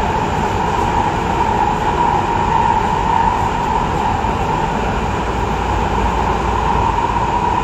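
No technical faults can be heard anywhere in this recording of sounds, with the signal remaining steady and intact throughout.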